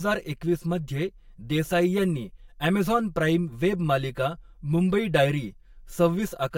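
Throughout, the speech sounds hollow and phasey with fixed notches: channel delay (comb filtering), one channel lagging roughly 5 ms before mono summing, notching from around 100 Hz.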